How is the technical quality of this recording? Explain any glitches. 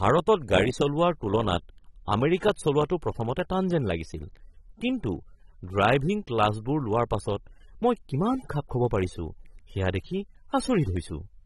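The quality is limited by plainly audible codec damage across the whole clip. Throughout, the speech sounds dull and smeared, with a warbling, fizzy edge on sibilants and nothing above 11.8 kHz. This points to AAC compression, likely AAC-LC at a low bitrate, lowering the cut-off and starving bands of detail.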